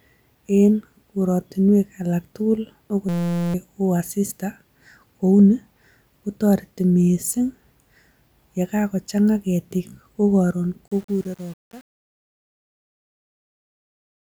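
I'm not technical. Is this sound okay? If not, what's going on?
No, there are two problems.

At 3.09 s, right after "en kortinwek alak tugul", you hit a system hang loop. The computer stalled, and the sound hardware kept replaying one tiny slice of audio, about 5.8 ms long, 78 times in a row until 3.54 s. Repeating that fast, it becomes a steady buzz at about 172 Hz instead of a stutter, and roughly half a second of real speech is missing underneath it.

The second problem starts at 10.88 s, after "kagochang'a ketik ko koron", and runs to the end. It's truncation distortion on a fade. During the fade-out from about 11 s to 14.2 s, the volume change was worked out with too little precision, which sounds like only about 7 bits. As the sound gets quieter, it turns gritty and grainy from about 10.99 s on.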